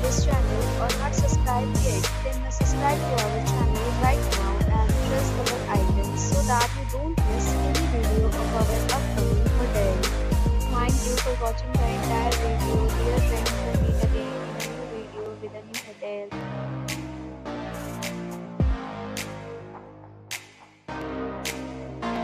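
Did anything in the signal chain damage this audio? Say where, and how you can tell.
Yes. From 0.31 s to 22.16 s there is a regular click roughly every 1.15 s, about twenty in all, spaced like clockwork whenever sound is present. That steady period points to the driver or buffer stage, likely clock drift buffer slips. Two devices on independent clocks differing by several hundred parts per million slowly overfill or drain the buffer between them. Each time it runs out of margin, a small block of a few dozen samples is dropped or repeated, producing the tick.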